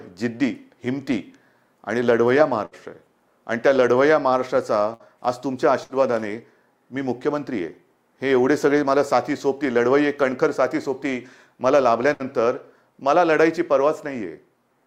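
At 2.65–2.75 s, 4.94–5.03 s, 5.84–5.92 s and 12.13–12.22 s, a burst of packet loss leaves about 60 ms concealed each time: the last sound is stretched into a decaying buzz or hiss, then 60 ms is skipped. On a spectrogram, smeared, flattened harmonics fade before an abrupt jump.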